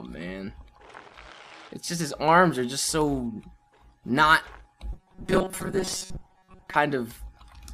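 From 4.92 to 6.76 s there is robotic sound from repeated short buffers, most likely because fresh audio stopped arriving fast enough and the playback side kept replaying its last fragment, about 5.3 ms long, in place of most of the real signal. Those rapid repeats impose a fixed buzz at 188 Hz, so the sound turns hard and metallic, keeping only a rough outline of its original shape until normal audio resumes.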